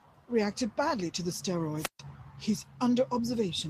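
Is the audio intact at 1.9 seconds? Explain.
No. At 1.9 seconds the speech is caught in a wireless microphone squelch dropout, running from 1.77 to 1.99 s. The radio signal fades and the receiver's squelch mutes the output. A brief rise of hiss leads into about 135 ms of near silence before the speech returns.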